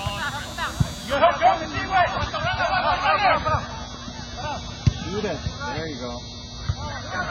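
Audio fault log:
1.15–7.31 s, adaptive stream at a lower bitrate: at 1.15 s the quality drops abruptly, with no gap, and stays degraded to the end. Nothing is heard above 6.5 kHz, so the top end sounds dull and boxed in, and swirly, watery codec artefacts rise sharply. The player appears to have switched to a much leaner encoding after the connection slowed, which fits a step down from around 128 kbit/s MP3 to roughly 16 kbit/s.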